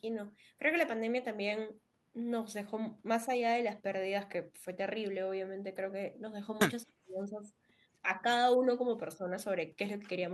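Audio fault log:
6.83–7.5 s, speech suppressed in double talk: the speech drops sharply, by roughly 40 dB at its deepest, across most of this stretch and nearly vanishes. The likely cause is an echo canceller that, with both sides talking at once, cannot tell this talker from loudspeaker echo and turns everything down.
8.02–8.26 s, 8.57–8.66 s, 9.16–9.32 s, speech suppressed in double talk: brief, shallow dips of about 5 dB, each lasting a fraction of a second, as the same suppression clips the speech more gently.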